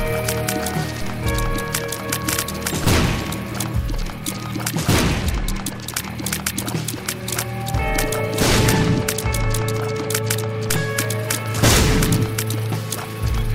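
At 1.02 s the waveform's zero line jumps by about -19 dBFS, a DC step, and at 10.70 s a second step of about -20 dBFS occurs. Each is heard as a brief low thump at the instant the baseline shifts. The offset then bleeds away, consistent with a high-pass around 2 Hz pulling it back toward zero, so no lasting displacement remains. The sound carries on unchanged through both events.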